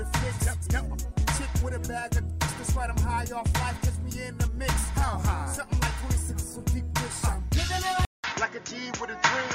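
At 8.05 s the sound drops out for about 0.19 s, then returns duller and narrower through to the end, with nothing above 7 kHz and a new background noise roughly 35 dB under the signal, while loudness stays about the same. This is likely an input switched to a poorer device. A simple low-pass filter change would not bring the brief silence at the switch or a fresh noise floor of its own.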